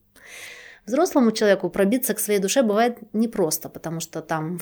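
From 0.46 s to 1.72 s the speech shows channel delay (comb filtering). One of the two original channels arrived a tiny fraction of a millisecond late, consistent with a delay of around two samples, and summing them to mono cancelled shared content where the two copies fell out of phase. With so short an offset the first notch sits high, near 10 kHz, so the effect is a dulled top end rather than a hollow tone. It clears just before "к своей душе бывает".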